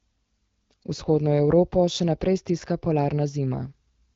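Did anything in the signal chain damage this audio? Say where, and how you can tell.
No, nothing in the signal chain has damaged this speech, and no stage shows a fault. The AMR wideband (HD Voice) path at 12.65 kbit/s is audible as a band limit near 7 kHz, with only light codec colouring of the speech.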